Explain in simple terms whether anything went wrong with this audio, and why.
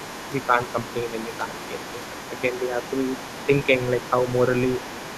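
Other side's voice leaking through: a second, fainter voice sits well underneath the main speech from 0.0 to 2.64 s and again from 2.82 s to the end. Unlike background chatter in the room, this is likely the far end's loudspeaker sound that the echo canceller failed to remove from the microphone.

Speech suppressed in double talk: the main voice briefly dips a little at 0.34–0.55, 1.25–1.46, 1.69–1.86, 2.5–2.79 and 3.47–3.7 s, nearly all while that second voice is present. The fact that the dips largely coincide with the other voice, rather than falling randomly like network dropouts, points to the likely cause: the echo canceller turning everything down when both people talked at once.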